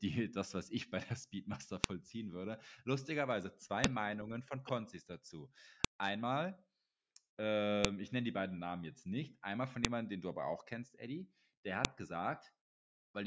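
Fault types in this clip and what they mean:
File header played as audio: the speech is made of 2-second pieces joined with their WAV headers left in, so those header bytes play back as samples. Each join gives a sharp, loud snap at 1.84, 3.84, 5.84, 7.85 (just before "ich nenne die beiden"), 9.85 (between "jetzt nicht einmal von" and "jemandem den du aber") and 11.85 s, whatever the speech is doing. On a waveform each is a brief, narrow spike. On a spectrogram it is a thin vertical line across all frequencies.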